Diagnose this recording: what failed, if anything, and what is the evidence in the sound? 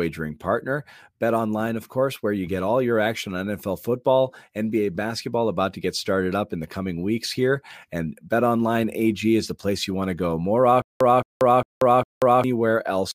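Stutter with silent gaps, 10.82 to 12.44 s, at the playback or streaming stage. One 0.22 s burst of speech repeats four times. Each repeat is followed by 0.19 s of digital silence, a 0.40 s cycle. A stalled buffer likely replayed its last fragment. The speech due then is lost.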